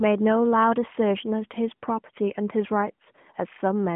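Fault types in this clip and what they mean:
No faults are present in this speech clip. It is carried over an AMR-NB mobile path at 12.2 kbps, so the sound sits in a telephone band of about 150 Hz to 3.4 kHz with nothing above 3.6 kHz, and only a light coding texture can be heard.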